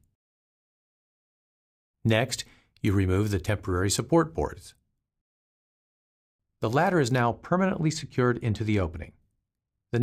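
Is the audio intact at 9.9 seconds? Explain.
Yes, at 9.9 seconds the audio is intact, with nothing breaking up, dropping out or distorting at that moment.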